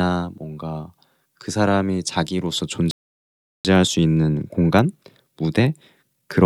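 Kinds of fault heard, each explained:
Playback stall: At 2.91 s the speech just drops out and the output sits silent for about 0.74 s, then picks up again at 3.65 s. That kind of mid-sentence hole most likely comes from the player running dry of buffered data or having its audio thread held up, so nothing reached the output until it got going again. It's a clean gap rather than a crackle, which points to the output simply being starved.
Time-compressed catch-up: Right after the gap, from 3.65 s to the end, the speech runs at about 1.1 times normal speed while the pitch stays put. That's the player clawing back the delay it built up during the stall by snipping out tiny slices of audio and cross-fading over the joins. You hear it as slightly rushed delivery.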